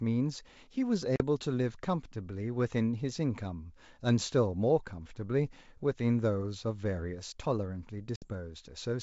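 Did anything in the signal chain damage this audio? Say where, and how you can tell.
Yes, at the network stage: packet loss on an ADPCM call. There are hard-edged silences of 40 ms at 1.16 s and 60 ms at 8.16 s. The decoder's predictor then briefly mismatches, so the speech returns slightly distorted.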